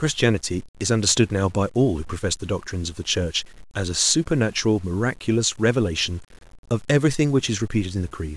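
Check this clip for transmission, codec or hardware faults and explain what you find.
There's one fault, and it runs through the whole clip: low bit depth without dither. Quiet passages turn gritty and the softest tails sputter or drop out instead of fading smoothly. The grain follows the speech rather than sitting as a steady hiss, with the distortion sitting roughly 30 dB under the signal. That's likely a requantisation to something like 8 bits, done by truncation with no dither, so the rounding error tracks the waveform.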